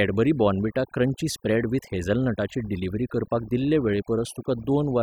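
Throughout the recording, the background drops to near silence dotted with twinkling specks. That is overdone noise removal: the reduction was set so strong that bands near its noise estimate get pulled down or muted, taking quieter parts of the voice with them.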